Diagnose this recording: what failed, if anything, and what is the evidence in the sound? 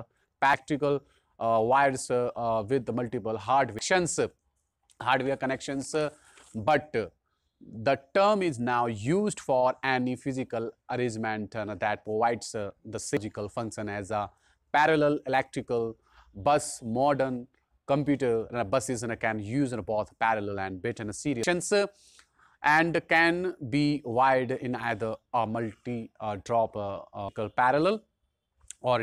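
The failure is in the codec stage: damaged data in a compressed stream. Five brief glitches are heard as short chirps or blips, at 0.54, 3.79, 13.17, 21.43 and 27.29 s. At each point, part of the encoded stream is corrupt, so the decoder misreads or discards those frames and loses sync. It then resumes at the next valid frame header, and the sound carries on from there.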